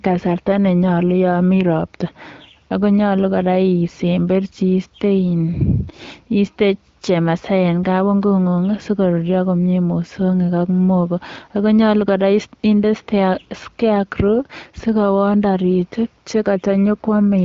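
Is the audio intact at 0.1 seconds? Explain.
Yes, the audio is intact at 0.1 seconds, with no fault at that moment.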